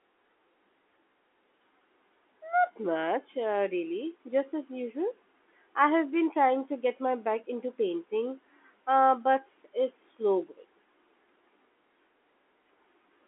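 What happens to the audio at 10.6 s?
Nothing goes wrong at 10.6 s: the speech carries on intact, with only the usual narrow band of the G.711 telephone coding it travels through.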